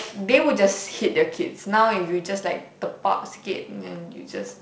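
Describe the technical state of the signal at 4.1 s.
At 4.1 s the signal is intact, with no fault present, just the light coloration of G.722 wideband telephone coding at 48 kbit/s.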